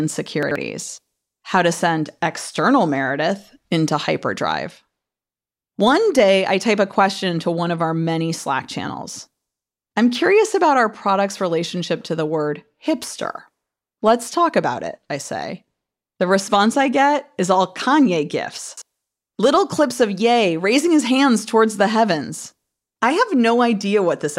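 At 0.43 to 0.56 s and again at 18.69 to 18.82 s the speech briefly jumbles: chunks out of order. In each case a block of about 42.67 ms arrives two chunks late and plays after the two blocks that should follow it. No audio is lost, but the sequence is scrambled, and three hard joins surround a short garbled moment.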